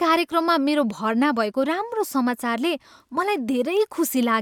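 No technical faults can be heard in this speech.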